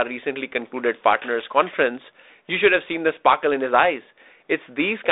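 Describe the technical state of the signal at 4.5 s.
At 4.5 s the audio is intact, with the speech carried cleanly through what sounds like a 32 kbit/s G.726 ADPCM telephone path that passes nothing above about 3.8 kHz.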